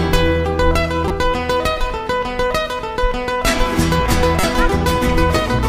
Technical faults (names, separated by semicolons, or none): damaged data in a compressed stream